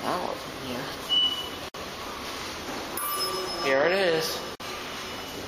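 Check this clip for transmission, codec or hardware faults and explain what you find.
Two gaps at joins of encoded pieces, at 1.69 s (about 57 ms) and 4.55 s (about 48 ms). Separately encoded segments were spliced untrimmed, so encoder start delay and final-frame padding remain. The sound drops out briefly with softened edges, then resumes where it stopped.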